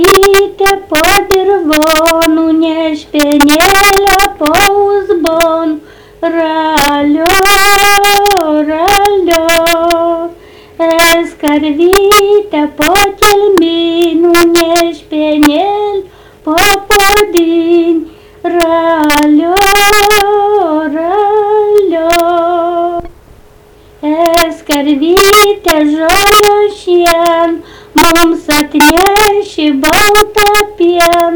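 Integer overflow runs throughout the clip. The signal is driven about 1 dB past the top of the integer range, and instead of being held at the limit, each sample that crosses it wraps around to the opposite extreme. Only a small share of the audio goes over, around 2 percent of samples, so the fault lands on the loudest moments, where it sounds like sudden violent cracks that are far harsher than ordinary clipping.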